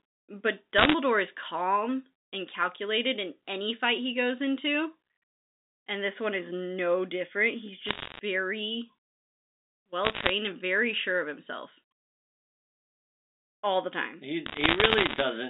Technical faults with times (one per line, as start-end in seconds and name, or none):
0.78-0.94 bit errors on a digital phone line
7.86-8.19 bit errors on a digital phone line
10.04-10.29 bit errors on a digital phone line
14.46-15.21 bit errors on a digital phone line